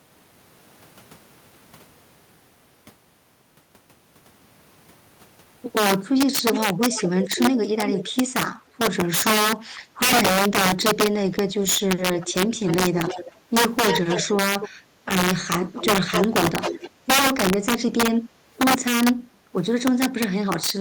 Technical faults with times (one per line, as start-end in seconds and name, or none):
0.00-20.80 integer overflow
6.53-8.12 echo leak
8.64-8.75 background gated by the echo canceller
11.99-13.32 echo leak
13.87-14.69 echo leak
14.79-15.05 background gated by the echo canceller
15.76-16.90 echo leak
18.32-18.46 background gated by the echo canceller